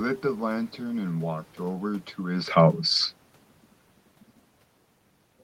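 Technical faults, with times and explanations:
No technical faults are present in the recording. Room noise sits in the background, and around two seconds the level shifts as the talker moves relative to the microphone.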